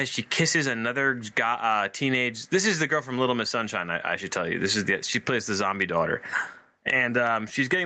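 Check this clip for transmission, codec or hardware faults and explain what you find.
There's one problem, and it runs through the whole clip: gain pumping. The level ducks by around 20 dB under loud bits, squashing everything. The likely cause is input gain set far too high, with a fast limiter clamping down, all on top of the call path's 8 kHz ceiling.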